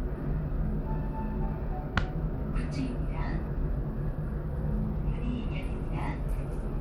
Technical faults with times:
0.00-6.81 Bluetooth SBC compression

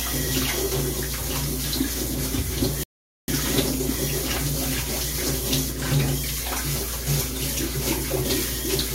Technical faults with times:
2.83-3.28 playback stall

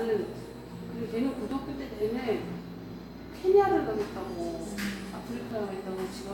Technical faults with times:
1.51 overlap between stream segments
5.51 overlap between stream segments

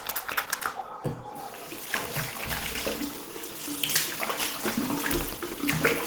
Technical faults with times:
0.00-6.06 Opus compression

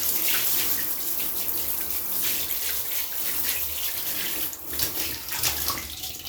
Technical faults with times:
none

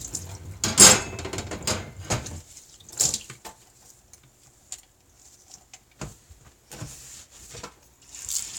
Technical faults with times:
none

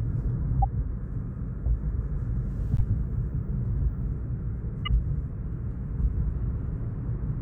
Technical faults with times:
0.61-0.64 corrupt frame decoded
2.77-2.82 corrupt frame decoded
4.85-4.88 corrupt frame decoded

